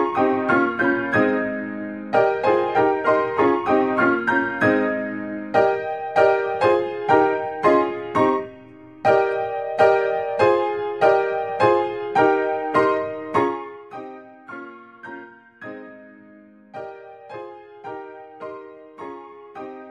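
From 13.35 to 13.85 s, zipper noise: a drop of roughly 20 dB arrives in rapid unsmoothed steps, about 200 a second, so a fine ticking buzz rides the fade.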